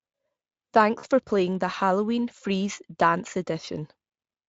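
A brief buzzy, smeared stretch at 0.99–1.05 s and a shorter one at 3.65–3.69 s: VoIP packet loss concealed by the speech codec. About 40 ms, then 20 ms, went missing, fitting two and one 20 ms Speex frames. The decoder extended its last pitch and filter at falling gain.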